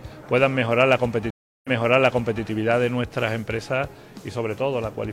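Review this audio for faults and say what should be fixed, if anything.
A stream reconnect occurs from 1.30 to 2.43 s. The connection dropped, leaving about 0.34 s of flat silence on the waveform, then a fresh decoder restarted and the server resent buffered data, so the audio replays material from 0.79 s earlier. On a spectrogram a blank vertical gap appears, followed by a repeated stretch that begins with a fade-in. To prevent it, keep the connection alive with a larger client buffer and resume by stream offset rather than restarting the decoder.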